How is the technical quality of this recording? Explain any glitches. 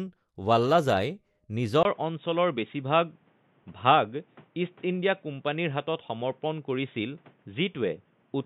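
The recording degrades sharply partway through. At 1.83 s a gap of about 20 ms is followed by a clear drop in bandwidth that lasts to the end: nothing above 3.8 kHz, so the speech turns dull and boxy, with a new noise floor roughly 35 dB under the signal but no obvious level jump. This is likely an input switched to a poorer device. On a spectrogram the upper energy ends abruptly at a flat ceiling after a thin blank stripe. The waveform shows a brief flatline.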